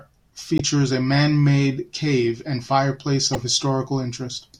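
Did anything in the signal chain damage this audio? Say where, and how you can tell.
Yes: damaged data in a compressed stream at the codec, short glitches at 0.58–0.61 s and 3.33–3.37 s after "cave and fireplace", where the decoder misread corrupted frames and lost sync.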